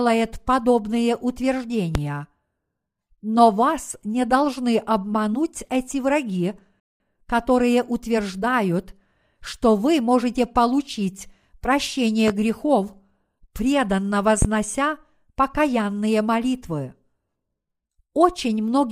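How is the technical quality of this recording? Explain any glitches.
The recording has two kinds of technical fault: three loud pops and one rebuffering stall.

Loud pops occur at 1.95–1.99 s, 12.28–12.32 s and 14.42–14.46 s. Each is a single sharp pop, about 40 ms long and peaking about 15 dB above the speech, with the talking continuing underneath. The likely cause is a brief voltage spike from a connector, a switch, static discharge or a driver glitch entering the signal path. The circuitry after it shapes the spike into a short, hard transient.

A rebuffering stall occurs at 6.80–7.00 s, between "должны обмануть эти враги" and "которые утверждают что вы". The playback buffer ran dry, so the audio dropped to silence for about 0.2 s and then resumed at exactly the point where it stopped. No speech is lost, but the gap inserts an unnatural pause that lengthens the clip by roughly 200 ms.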